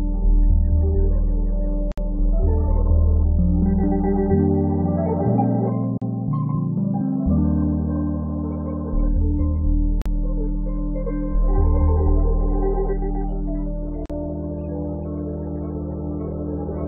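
Gap at a join of encoded pieces at 1.92 s (58 ms), then 5.98, 10.02 and 14.06 s (40 ms each), every 4 s: separately encoded pieces were joined untrimmed, leaving encoder delay and padding as brief silences with smeared edges.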